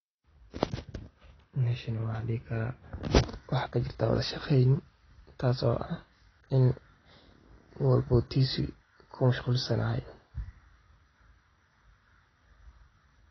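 Speech that sounds dull and smeared throughout, with nothing above 6.5 kHz and audible warbling, likely from AAC compression at a low bitrate, around 24 kbps.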